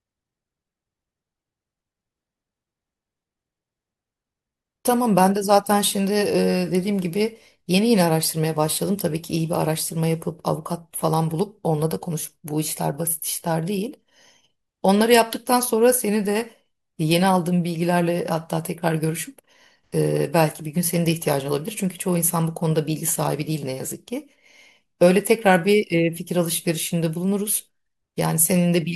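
Speech recording with no technical faults to report.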